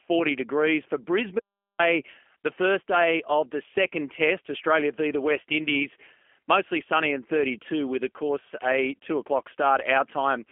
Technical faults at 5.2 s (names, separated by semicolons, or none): G.729 codec